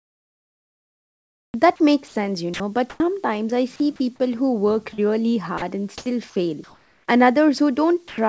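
From the start to 3.0 s the speech is chopped by the voice detector. Quiet stretches and word edges, about 1.8 s in total, give way to a smooth synthetic hiss. The same gating recurs briefly between 3.76 and 4.0 s, where about 80 ms is lost, and again from 5.58 to 7.08 s, with about 620 ms replaced. The likely cause is a sender-side voice activity detector switching on and off repeatedly, with the receiver inserting comfort noise during each off period. The repeated switching within one stretch is what sets this apart from a single dropout.

Between 4.94 and 5.0 s a short concealed packet loss appears. About 40 ms of audio never arrived, and the receiver extended the preceding sound to cover it before blending back into the real signal. The result is a brief smear or wobble. That distinguishes it from the voice-detector gaps, which are replaced by hiss instead of a stretched copy of the preceding sound.

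At 8.08 to 8.18 s the sound is dropped by the voice detector. About 90 ms of speech, likely misread as background, disappears under steady comfort noise for roughly 100 ms. Unlike the chopped passages, this is one clean cut to noise near the end instead of repeated flickering. Throughout the clip nothing is heard above 8 kHz, which fits G.722 at 64 kbps on the call path.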